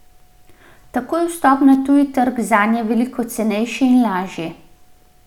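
From 1.73 to 1.75 s, a sharp snap of clicks, peaking at roughly -20 dBFS, cuts across the speech. This is an electrical switching spike, most likely from a nearby switch, motor or static discharge arcing briefly and being picked up on the audio line.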